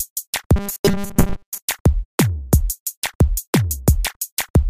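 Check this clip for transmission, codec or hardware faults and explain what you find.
One fault is audible: robotic sound from repeated short buffers, from 0.56 to 1.59 s. New audio likely arrived too seldom, so a short stretch was looped over and over, which fits a buffer of about 5 ms. Those repeats replaced most of the real audio in that span. They impose a rigid 200 Hz buzz that follows the original sound only roughly.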